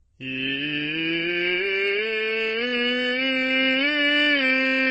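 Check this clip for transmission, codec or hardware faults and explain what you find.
Two faults are audible in this music clip: layered codec damage throughout, and a slowed stretch from 1.91 s to the end.

Transcoding between lossy codecs affects the whole clip. The highs stop at the lowest cut-off in the chain, and several different kinds of artefact sit on top of each other. That mix points to low-bitrate encodes, MP3 at 31 kbit/s, Opus at 24 kbit/s and Vorbis at 29.5 kbit/s, likely applied one after another, ending in Vorbis. Each stage wasted bits on the previous stage's errors while adding its own. The mixture of artefact types is what distinguishes this from a single poor encode.

A time-stretched section runs from 1.91 s to the end. The music abruptly drops to about 0.58 times its pace, yet its pitch stays put. Short pieces were likely repeated to fill the length, leaving the music dragging. 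The unchanged pitch is what distinguishes this from slowed playback.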